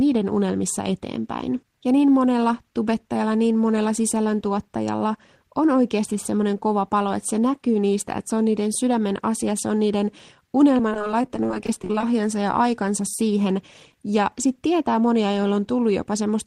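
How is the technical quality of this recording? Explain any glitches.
The recording has one glitch, a burst of repeated packet loss (robotic sound) from 10.77 to 12.03 s. Over that stretch the audio keeps dropping out in short holes, none longer than about 20 ms, and each hole is bridged by stretching the last bit of sound. About a quarter of the span is patched this way, so the speech turns choppy, with pieces missing. On a spectrogram, harmonics smear into flat, repeated slices; the waveform shows stuttering, copied segments.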